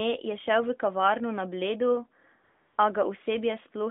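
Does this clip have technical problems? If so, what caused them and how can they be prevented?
Yes. From 2.44 to 2.78 s, the phone's voice activity detection judged the talker silent, so no speech frames were sent for about 340 ms. The receiver filled the gap with AMR comfort noise: a smooth, steady synthetic hiss replaces the real background and then switches back out. To prevent this, disable discontinuous transmission or make the voice activity detector less aggressive so quiet passages are still sent as speech.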